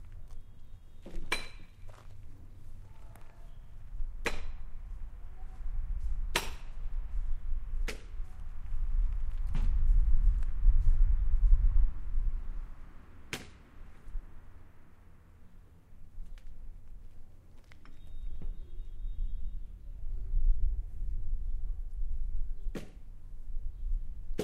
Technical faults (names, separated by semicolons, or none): none